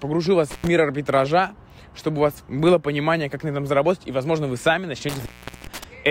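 At 0.51 to 0.67 s, an intermittent contact drops the sound for about 93 ms. A loose connection opens briefly, with crackle at each edge and faint hiss in the gap. At 5.09 to 5.84 s it recurs, opening for about 412 ms.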